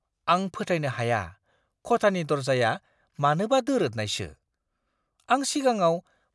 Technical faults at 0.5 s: none

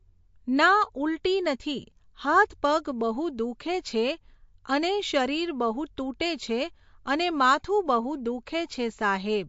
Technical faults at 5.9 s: MP3 compression

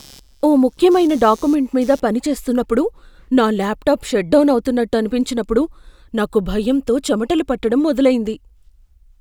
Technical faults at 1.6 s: computer activity noise

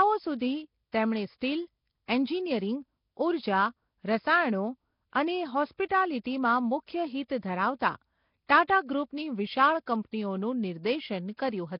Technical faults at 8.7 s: Nellymoser compression; pre-echo

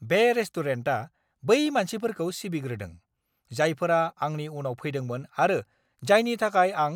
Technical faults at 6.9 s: none

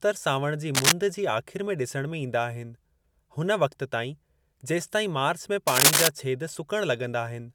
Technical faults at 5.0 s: none

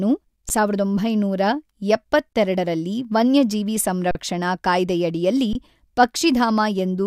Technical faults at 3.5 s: none

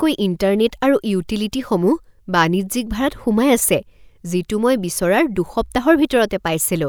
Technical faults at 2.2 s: none

